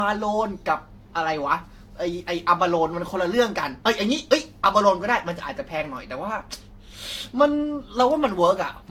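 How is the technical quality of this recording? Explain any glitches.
The technical quality is compromised by one fault running through the whole recording: generation loss. From start to finish the speech sounds swirly and hollow, with a watery smearing around consonants and softened attacks, and nothing is present above about 18.5 kHz. The likely cause is repeated lossy coding, with the audio decoded and re-encoded around five times with a codec like Vorbis near 64 kbit/s. Each pass requantises on a shifted frame grid, so noise and spectral gaps accumulate beyond what that bitrate alone would produce.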